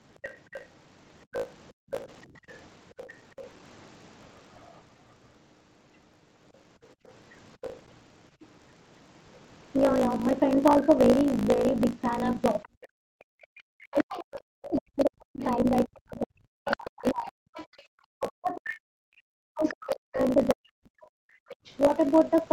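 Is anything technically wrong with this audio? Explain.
Yes, there are four distinct problems here, one running the whole way through and three coming from the echo canceller.

Throughout the clip there's a block size mismatch with truncation. One stage hands over longer blocks than the next one reads, and the tail of every block gets dropped. You hear that as a steady buzz at about 54.4 Hz, the rate of the chopping, and the speech runs about 1.16 times fast while the timbre stays roughly where it should be. The numbers fit 1024-sample blocks being cut short.

The other side's voice is leaking through from 0.15 to 3.44 s, briefly again from 7.62 to 7.71 s, and for a long stretch from 12.63 to 21.77 s. It sits around 15 dB under the main talker. The likely cause is the far end playing on the talker's loudspeaker and the echo canceller not fully cancelling it out of the mic, so a second, quieter voice rides underneath.

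The background is gated by the echo canceller five times: 1.72 to 2.48 s, dropping by about 40 dB; 6.94 to 7.05 s, about 28 dB; 13.52 to 13.58 s, about 38 dB; 17.77 to 17.90 s, about 23 dB; and 21.55 to 21.65 s, about 34 dB. Each time the canceller clamps the mic while the loudspeaker is active, so the room tone suddenly falls away and then comes back.

From 12.65 to 21.26 s there's speech suppressed in double talk. Both ends are talking over each other there, and the canceller, likely unable to tell the talker apart from the loudspeaker echo, pulls everything down. The talker's voice dips hard, as much as roughly 40 dB, and breaks up in pieces, adding up to something like seven seconds of damage inside that window.

The call path band-limits everything to 8 kHz. That's normal for this path and isn't one of the faults.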